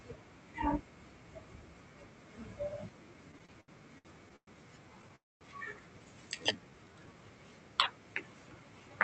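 Repeated stalls (stutter) run from 3.31 to 4.50 s. The jitter buffer emptied seven times, and the receiver stretched the last sound across each wait, the longest 112 ms, filling about 319 ms, or roughly a quarter of that stretch. Nothing is lost, but the speech drags and stutters.

A call audio freeze at 5.16 to 5.44 s puts a gap of about a quarter second into the speech, mostly silence after a brief fading continuation of the last sound. The cause is likely packets held up in transit, draining the jitter buffer and adding 252 ms of delay.

A jitter buffer slow-down follows at 6.35 to 7.14 s. To rebuild its reserve, the receiver repeated single pitch periods, adding 128 ms and playing the passage at 85% speed. Pitch stays the same while sounds draw out. The call codec limits the bandwidth to 8 kHz throughout.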